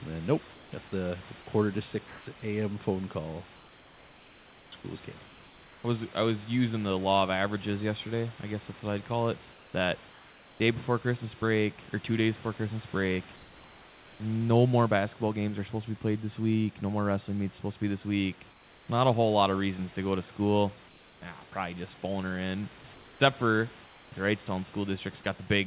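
Discontinuous transmission likely replaced pauses with comfort noise from 0.54 to 5.84 s (about 2.1 s swapped), 9.52 to 10.6 s and 13.36 to 14.2 s. The room background turns flat and featureless, dropping about 3 dB in the last gap. From 18.5 to 25.26 s, the voice detector likely switched repeatedly, chopping about 1.3 s of sound into comfort noise. The speech turns choppy.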